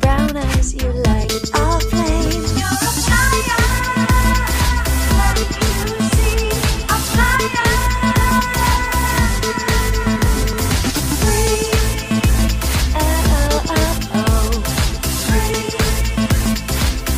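Dropped buffers at 1.24 s and 10.53 s: at each point the audio jumps forward, and nothing falls silent. The cause is likely an overrun, where the capture hardware overwrote a block of samples before the program read it, so the audio on either side of the missing block is joined directly. About 5 ms goes missing at 1.24 s. Around 20 ms goes at 10.53 s, a longer skip.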